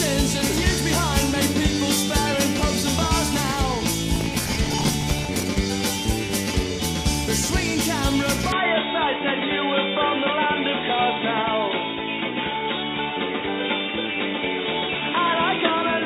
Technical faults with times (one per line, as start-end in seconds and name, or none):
4.15-5.43 processor overload crackle
8.52-16.05 input switched to a poorer device